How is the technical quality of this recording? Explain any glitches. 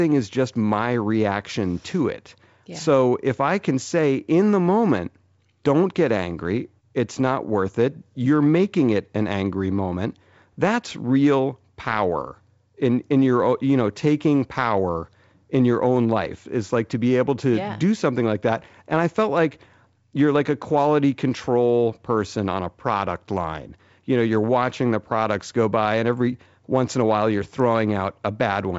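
There are no glitches or technical faults to point out in this speech recording. It carries the sound of G.722 wideband telephone coding at 64 kbit/s, with the band ending around 7.7 kHz and at most a faint trace of coding noise in the upper range.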